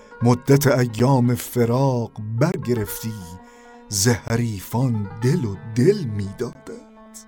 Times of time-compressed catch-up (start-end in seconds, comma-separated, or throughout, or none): none